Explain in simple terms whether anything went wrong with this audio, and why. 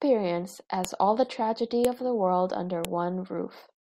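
Sharp clicks at 0.85 s (before "all the tragedy of"), 1.85 s and 2.85 s (after "of the world under") come from the file header played as audio, repeating every one-second piece.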